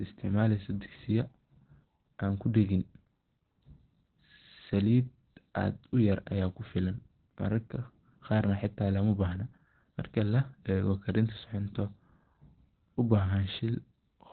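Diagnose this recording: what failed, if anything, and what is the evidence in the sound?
The speech is muffled and hoarse from start to finish, with nothing above 4.2 kHz. At the codec stage, the likely cause is heavy Opus compression in its narrowband speech (SILK) mode, which fits a rate of roughly 12 kbps.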